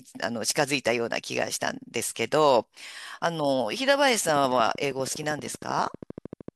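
From 4.29 s to 6.49 s a train of clicks runs over the speech, about thirty evenly spaced pulses at 12.7 per second, peaking around 5 dB above the signal. It is likely interference from nearby equipment or a faulty connection or power supply, heard as steady ticking.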